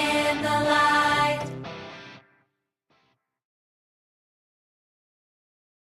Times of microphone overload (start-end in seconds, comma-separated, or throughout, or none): none